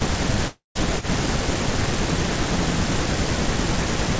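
Speech suppressed in double talk runs from 0.0 to 1.27 s, again at 2.06 to 2.26 s, and from 3.06 s to the end. The voice dips by about 10 dB in pieces, roughly a third of a second in all in the first stretch and only a brief moment in the second. The likely cause is an echo canceller that could not tell the near talker from loudspeaker echo while both sides spoke, so it turned everything down.

A long network dropout falls between 0.48 and 0.77 s. Over about 0.27 s the sound is carried on as a fading buzz, ending in about 0.16 s of near silence before the audio resumes with about 0.28 s gone. This likely comes from packets that never arrived, which the receiver papered over with concealment until it gave up.

An echo leak appears at 1.00 to 1.05 s as a short, faint scrap of the voice returning about 0.43 s late, around 20 dB below the speech. Its likely source is a far-end loudspeaker whose echo canceller let part of the pickup through. 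Throughout, nothing is heard above 8 kHz, which fits a wideband call codec.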